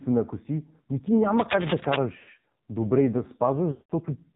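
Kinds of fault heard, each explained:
AMR narrowband mobile codec: the whole speech clip has passed through AMR-NB at a low rate, with the sound fitting about 5.9 kbps. Nothing above 4 kHz survives, so a spectrogram is empty over that line. The voice is buzzy and synthetic from heavy coding damage, and the harmonics look smeared.
Cable scratch noise: from 1.38 to 1.96 s, just after "ако си ми ти", dense uneven bursts of scratching lie over the speech at roughly the same level as the voice. This is likely a worn cable or connector being moved. On the waveform it shows as jagged spikes, and the spectrogram shows broadband speckle.
Lost AMR speech frames: at 2.18 to 2.30 s, just before "добре и да", about 100 ms of sound is drawn out and fades before the speech returns weakly. After "добре и да", 3.72 to 3.92 s repeats this for about 180 ms, fading to silence. Smooth held bands then a gap appear on a spectrogram.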